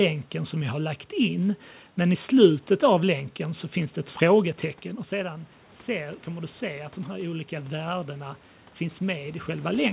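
From 5.11 s to 9.76 s the automatic gain rises. The level had dropped about 10 dB, and the gain control slowly adds about 7 dB back. Unlike a talker moving closer, the room noise swells along with the voice, a slow joint rise.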